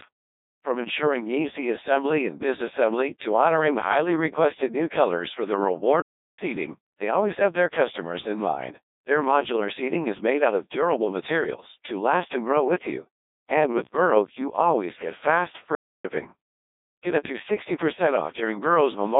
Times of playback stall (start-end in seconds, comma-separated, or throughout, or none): 6.02-6.39, 15.75-16.05